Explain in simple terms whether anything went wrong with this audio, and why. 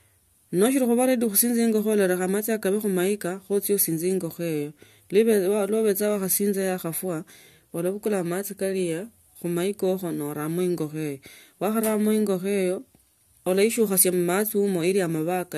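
A block of digital silence at 14.50 s: for about 2.7 ms the speech drops to silence and jumps straight back with no fade, so you hear a small tick. The gap's length fits a 128-sample audio buffer that wasn't filled in time.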